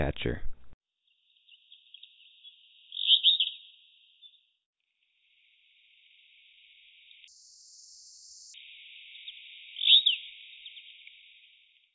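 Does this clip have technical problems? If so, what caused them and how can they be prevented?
Yes. From 7.28 to 8.54 s there is a wrong sample rate fault: the samples were sent to playback at a faster clock than the one they were captured with, and no rate conversion was done. The sound runs at twice its proper speed and rises a full octave, 12 semitones, which fits audio captured at 8 kHz being played at 16 kHz. Keeping the recording rate with the data and resampling whenever the output rate differs prevents this.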